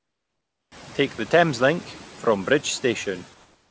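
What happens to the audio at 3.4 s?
From 3.34 s to the end at 3.70 s, comfort noise replaces the background: the real room sound gives way to a steady, featureless hiss at the same level, likely from discontinuous transmission filling the pause.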